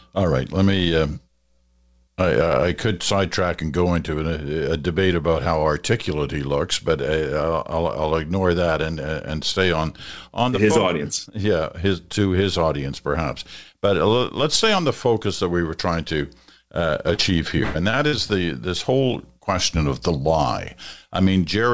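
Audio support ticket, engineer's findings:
Short concealed packet loss at 17.14–17.33 s, just after "were trying to uh", and at 17.91 s. Brief smear of about 40 ms, then about 20 ms, with the last sound continued and blended back. Shorter than the bursts, with no fading tail.

Burst of packet loss at 17.63–17.77 s, about 120 ms filled, and at 18.07–18.14 s, about 60 ms, right before "the this whole question". Audible as the last sound held and fading, then the audio resumes further on with a chunk missing. The fade is what separates these from the short patches.

All four events fall within about one second, which points to a network or jitter-buffer underrun on the G.722 call path (64 kbps, nothing above 8 kHz) rather than a decoder fault.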